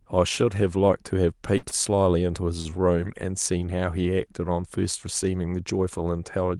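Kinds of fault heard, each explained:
burst of packet loss: A short run of speech never reached the listener, and the receiver covered the hole by extending the last sound and letting it fade. At 1.57 s to 1.66 s, about 54 ms of concealment replaces the lost audio. The fill sounds like the last sound held and sinking away. When speech returns, about 60 ms of it has been skipped.
short stall from a late packet: Here a packet arrived late, so the jitter buffer briefly ran dry. The receiver stretched the last sound to bridge the wait, then carried on from the same spot. Nothing is lost, but the timing drags. Right after the loss, at 1.69 s to 1.74 s, a sound holds about 27 ms too long. At 2.61 s to 2.71 s, another sound stretches by about 37 ms, with a faint buzzy dip.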